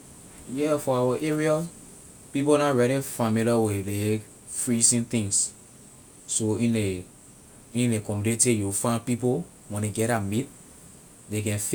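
Nothing in the speech stood out as a technical fault on listening.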